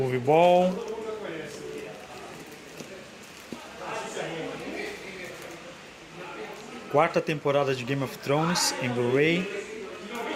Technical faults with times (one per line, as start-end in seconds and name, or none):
none